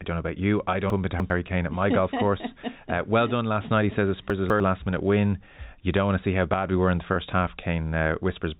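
Just after "about you I", from 0.9 to 1.3 s, the sound jumbles briefly: chunks out of order. A 100 ms chunk was written three chunks late, so it plays after material that should follow it. Nothing is missing, unlike a dropout, which leaves a gap. There are three hard joins where mismatched waveforms meet. It recurs from 4.3 to 4.6 s, just before "last minute win", this time with a chunk displaced by two positions.

From 7.14 to 7.16 s, right after "we were in the", a single lost 20 ms packet causes packet loss with pitch repetition. The receiver fills the hole by repeating the last pitch cycle, so the sound holds for an instant with a faint buzzy edge. There is no silence and no jumbling, which sets it apart from the reordering earlier. All of this sits within the narrow telephone band of the G.711 A-law coding, which tops out below 4 kHz.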